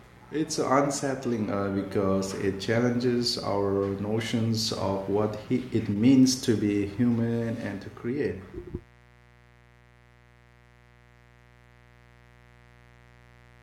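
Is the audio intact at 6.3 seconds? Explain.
No, at 6.3 seconds there's mains buzz, present all the way through: 60 Hz switching spikes with harmonics into the kilohertz range, giving a steady raspy buzz roughly 30 dB under the speech.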